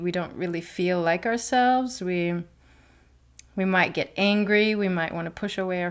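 No technical faults are audible.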